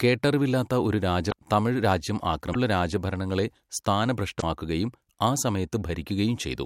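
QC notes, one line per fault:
1.29–1.32 s, 2.51–2.56 s and 4.38–4.43 s: damaged data in a compressed stream. Three short blips cut into the speech, the first between "കേട്ടറിവില്ലാത്ത ഒരു" and "തമിഴ് രാജ്യം", the second just after "തമിഴ് രാജ്യം". Corrupt bytes make the decoder misread frames and lose sync.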